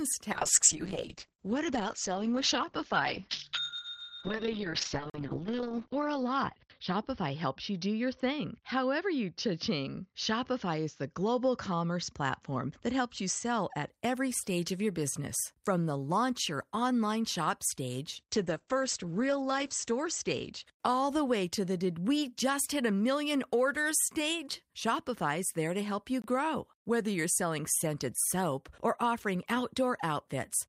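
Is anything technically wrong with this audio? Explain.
Yes. There are two kinds of fault.

Call bitrate drops run from 0.32 to 13.96 s, ending before "every stage of your", and from 18.18 to 21.46 s, between "your online shop stage" and "to the did we". The encoder's bitrate fell from 40 to 8 kbps, and later from 40 to 10 kbps. The speech turns coarse and muffled, with the top cut to 6 kHz and 8 kHz.

Blocks of digital silence occur at 5.10 to 5.14 s and at 26.22 to 26.24 s, after "there to help you". Output buffers that were likely left unfilled dropped to zero, giving abrupt holes of about 43 and 21 ms. Those lengths fit 2048- and 1024-sample buffers.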